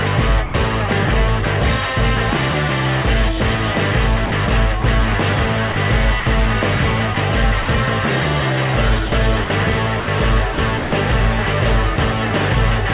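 From 0.46 to 0.54 s, about 80 ms of the sound is dropped by the voice detector: the audio gives way to a short stretch of steady synthetic hiss before resuming. The likely cause is a sender-side voice activity detector that classed this stretch as background and stopped transmitting, so the receiver filled the gap with comfort noise. The same happens again, more briefly, from 11.96 to 11.98 s, where a 20 ms sliver is replaced.

Between these, four stretches sound chopped by the voice detector: 4.26–4.84 s, 5.72–6.26 s, 7.14–7.68 s and 9.06–10.92 s. In each, the detector likely toggled between sending and muting more than once, so pieces of the sound are swapped for comfort noise, about 80 ms, 100 ms, 80 ms and 380 ms in total respectively. The result is choppy. All of it is heard through a call path with nothing above 4 kHz, consistent with 64 kbps G.711 A-law.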